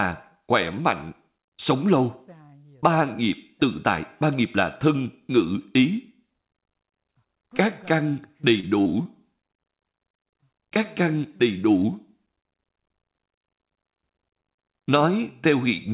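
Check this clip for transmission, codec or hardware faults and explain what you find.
Yes, there are transmission faults: three brief dropouts, then a choppy stretch. The audio stops sharply at 4 kHz, which fits a G.711 mu-law call path.

Short concealed packet loss occurs at 8.60–8.67 s, 8.82–8.87 s and 9.03–9.07 s. Each hole is 20 to 40 ms of missing audio. The receiver patched it by extending the preceding sound, then blending back. Each one is heard as a quick smear or wobble.

Repeated packet loss (robotic sound) runs from 9.91 to 10.45 s. Several short holes, none over 17 ms, arrive in quick succession. Each one is patched by continuing the last sound before the next arrives. The result is choppy sound with fragments missing.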